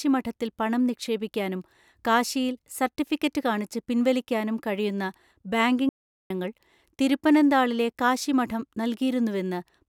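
Speech, with one audio dropout to silence from 5.89 to 6.30 s, likely from the input briefly failing or being muted while recording continued. For those 0.41 s the signal goes silent with no room tone, cutting in and out abruptly, and that stretch of speech is lost.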